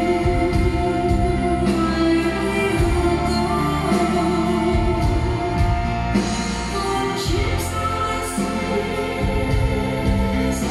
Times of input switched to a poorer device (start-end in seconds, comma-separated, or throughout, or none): none